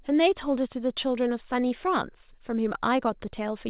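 Nothing goes wrong in this one, and the narrow, phone-like band with nothing above 4 kHz is just what you'd expect from a G.711 mu-law call path.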